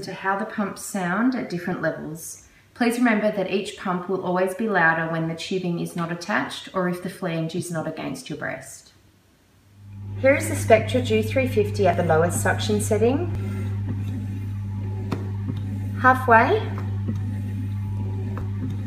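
At 1.72 s the sound jumps forward. The same happens at 11.94 s, again losing roughly 20 ms. At 13.35 s and 18.41 s the jump is larger, around 50 ms. There is no gap of silence at any of these points. The audio on either side is simply butted together. The likely cause is a dropped buffer (overrun), where incoming samples were overwritten before the program read them.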